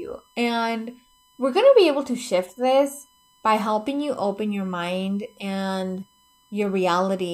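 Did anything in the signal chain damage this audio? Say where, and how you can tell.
Yes. A USB whine runs under the speech for the whole clip. It is a steady tone at 1 kHz, sitting roughly 40 dB below the speech. It holds a fixed pitch and never follows the speech. That points to the analogue wiring, not the codec or network. The USB bus pulls current in 1 ms frames. That 1 kHz ripple leaks through a shared power or ground path into the audio input.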